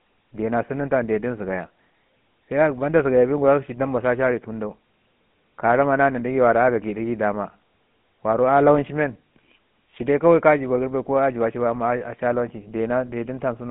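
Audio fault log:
Throughout, GSM full-rate codec: the speech has a plainly audible buzzy, gravelly roughness and a thin, boxed-in tone confined to 150 Hz to 3.4 kHz. The voice is rebuilt from a vocal-tract model driven by sparse, regularly spaced pulses, which fits a 13 kbps stream.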